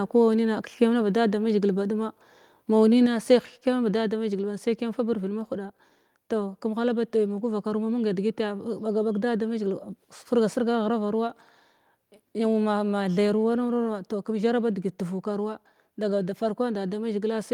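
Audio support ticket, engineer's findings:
Microphone volume stepped down at 3.06 s, between "mazhigil ba ɗuma mau" and "sai hekkyam bada damazhigil". Speech and background both drop about 4 dB at once, likely the app cutting mic input gain.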